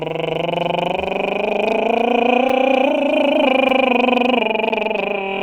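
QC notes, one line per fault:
2.49 s, 3.69 s and 4.69 s, block of digital silence: the music drops out for 5.5 ms, 5.3 ms and 10 ms, each heard as a tick or dip because the waveform snaps to silence and back with no fade. This points to output buffers not being filled in time.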